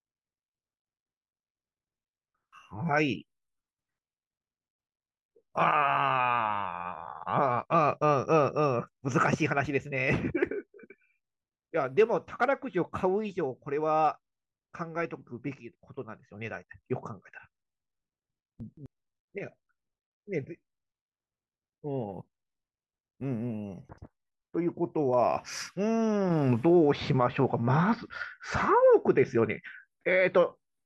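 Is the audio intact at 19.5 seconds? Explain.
Yes, at 19.5 seconds the speech plays through intact, with no dropout, click, distortion or other fault to be heard at that moment.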